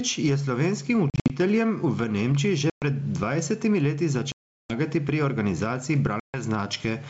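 Gain pumping runs through the whole speech clip. The level breathes, swinging by roughly ten decibels as each loud syllable arrives. Loud and quiet passages sit closer together than they should, so the speech sounds squashed. This is likely caused by a microphone gain set far too high, with a fast limiter or compressor clamping down on every peak.

Packet loss on an ADPCM call first appears from 1.10 to 1.32 s. Here 140 ms goes missing in short bursts scattered over 200 ms, the longest about 60 ms. From 2.70 to 2.84 s, 120 ms drops out. The worst gap runs from 4.32 to 4.73 s, 380 ms in all. The last runs from 6.20 to 6.42 s, with 140 ms lost. Each hole is hard-edged silence. Afterwards the speech comes back with brief, slight distortion. The decoder's predictor and step size have drifted from the sender's. They need some tens of milliseconds to realign.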